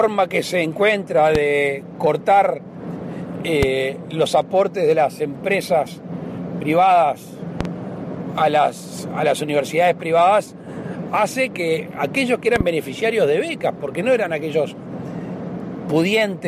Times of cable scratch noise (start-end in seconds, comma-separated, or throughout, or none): none